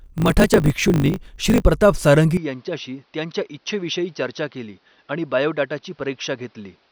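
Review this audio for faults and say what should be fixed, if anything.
From 0.0 to 1.64 s the speech carries a steady 50 Hz buzz and runs about 1.07 times fast while keeping its timbre. This is a block size mismatch (truncated): one stage writes longer blocks than the next reads, which fits 1024-sample blocks, and each block's tail is dropped at a 50 Hz rate. Matching block sizes between stages prevents this.

From 2.37 s onward the speech turns dull and boxy. It drops about 10 dB in level and gains a new background noise roughly 35 dB below the speech. There is no gap at the change. The likely cause is the input switching to a poorer device partway through. Locking the input device for the whole recording prevents this.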